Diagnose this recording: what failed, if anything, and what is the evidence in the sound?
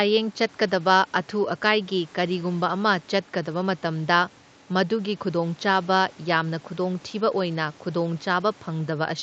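Nothing stood out on listening to this speech recording, which sounds like an ordinary call with its top end rolled off around 8 kHz.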